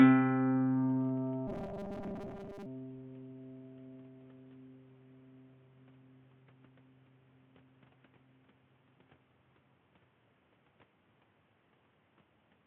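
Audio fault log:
1.48 to 2.66 s, robotic sound from repeated short buffers: the music collapses into a rigid 200 Hz buzz, likely from a 5 ms chunk replayed over most of the audio.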